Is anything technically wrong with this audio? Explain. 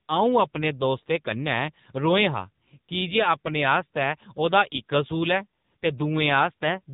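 Yes. Throughout, the speech carries AMR narrowband mobile codec damage. Nothing passes above 4 kHz, and the voice turns buzzy and synthetic, which fits a low 6.7 kbps mode. Simple band-limiting would only dull it.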